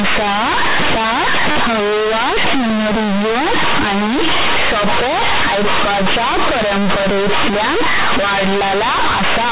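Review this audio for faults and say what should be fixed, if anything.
Companded audio read as linear, throughout: unexpanded mu-law bytes play as raw 8-bit samples, so quiet passages swing like loud ones, giving buzzy distortion and noisy pauses. To prevent it, expand the mu-law G.711 bytes to linear PCM through the standard decoding table before playback or further processing.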